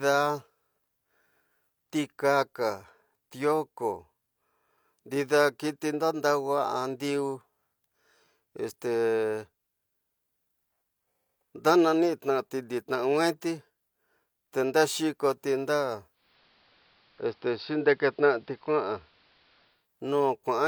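Speech clip, and after "te ndarkoti nda" at 16.11 s the receiver does a digital radio blend to analogue AM, easing over in about 277 ms: hiss creeps in roughly 35 dB down, level shifts about 1 dB, until it blends back at 19.88 s.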